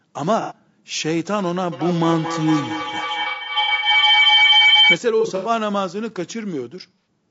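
The whole speech clip sounds rough and grainy, with noise filling the gaps between harmonics and a thin, synthetic-sounding top end. That's likely low-delay AAC compression, AAC-ELD pushed hard at something like 32 kbps, where its short frames can't resolve pitch structure cleanly.

Then there's AAC frame loss with concealment. From 0.41 to 0.55 s you get a smeared, phasey patch where the decoder is guessing from the last good spectrum. It comes back from 3.23 to 3.88 s as scattered dropouts, the longest run around a tenth of a second. It hits again from 5.21 to 5.50 s, and briefly at 6.99 to 7.05 s.

From 1.72 to 5.04 s a feedback howl builds up. Two devices in the same room are looping the call back on itself, and each pass adds gain, narrowing the sound to a tone somewhere near 3 kHz. Its loop comes round about every fifth of a second, and it peaks at about 6 dB over the speech.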